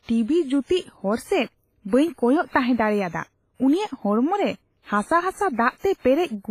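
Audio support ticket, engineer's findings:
Ringing, washy speech throughout. Hiss breathes with level. Nothing above 15.4 kHz. Likely WMA compression, heavily quantised, which fits around 24 kbps.

Pre-echo, 5.78 to 5.84 s. Hiss runs 53 ms before an attack, which sounds smeared. The transform block spreads loud-part quantisation noise into the quiet lead-in.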